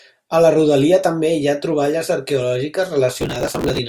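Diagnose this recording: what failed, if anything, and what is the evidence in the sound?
The failure is at the driver and buffer stage: processor overload crackle from 3.19 to 3.79 s, near the end of the speech. The sound breaks into a dense, gritty tearing that sits on top of it for just over half a second and then stops. Very short buffers, around a millisecond and a half each, were missed roughly a hundred times and skipped, leaving hard-edged gaps. Network packet loss would produce fewer, longer dropouts rather than this fine, continuous crackle.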